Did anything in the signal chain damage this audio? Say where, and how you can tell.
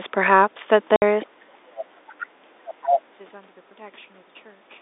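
Yes. At the network stage, packet loss filled with silence cuts a hole from 0.96 to 1.02 s. The sound stops dead for 60 ms, with hard edges. The gap fits two lost 30 ms packets replaced by digital silence.

In call processing, the other side's voice leaks through. A second voice surfaces at 1.22 to 1.26 s, 1.75 to 1.82 s and 2.09 to 2.24 s, about 20 dB down. From 2.67 to 3.0 s it is only about 5 dB down. The likely cause is an echo canceller leaving loudspeaker pickup in the microphone.

Also in call processing, speech is suppressed in double talk. The main speech dips by roughly 30 dB from 1.25 to 1.6 s and by roughly 20 dB from 1.85 to 1.98 s. Both dips fall just after the leaked voice appears. An echo canceller ducking both voices while the far end talks is the likely cause.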